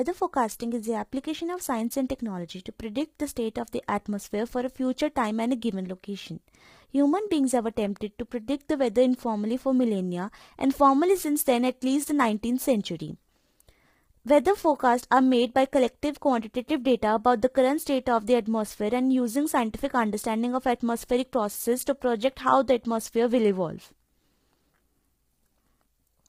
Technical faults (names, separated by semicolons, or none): low-delay AAC compression